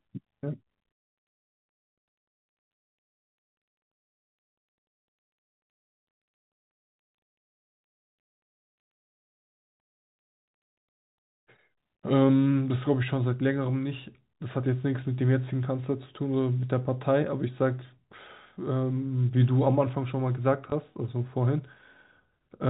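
A small blip lands at 20.70 to 20.72 s, near the end of the speech. This is packet loss with the last packet repeated: one 20 ms packet went missing, and the receiver filled the gap by replaying the packet before it. The band-limited telephone sound, with nothing above 4 kHz, comes from the G.711 coding.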